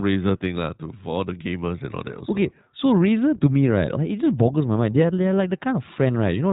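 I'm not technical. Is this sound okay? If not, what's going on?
No. The whole clip has gone through the iLBC codec, a phone-call compressor. It cuts everything above 4 kHz, so the speech sounds muffled and thin. It codes every 20 ms chunk separately, which leaves the speech clearly rough and slightly robotic throughout.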